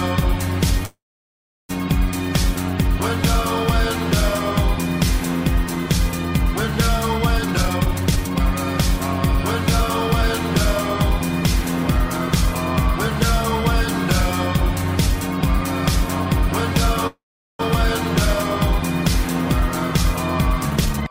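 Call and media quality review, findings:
Call audio freeze, 0.85–1.71 s: audio stalls, brief fading fill, then about 710 ms of silence; resumes where it stopped, nothing lost. Likely jitter buffer underrun from delayed packets; 836 ms gap inserted, latency up by the same.

Call audio freeze, 17.07–17.61 s: same pattern, short decaying fill then about 410 ms silent, continuity intact. Likely packet stall draining the jitter buffer; 525 ms inserted, no content missing.

Jitter buffer speed-up, 7.38–8.40 s: audio rushed at 165% speed, pitch unchanged. Receiver trimming pitch-period chunks back-to-back to drain excess buffered audio, roughly 0.7 s removed.

Jitter buffer speed-up, 20.71 s to end: hurried playback at 160%, same pitch. Repeated short pitch-period cuts shedding buffer backlog, about 0.3 s removed.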